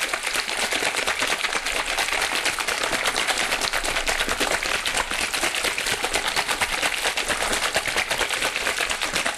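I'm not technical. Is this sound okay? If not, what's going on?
Yes, this sound is okay: nothing in it points to a technical problem with the recording or its playback.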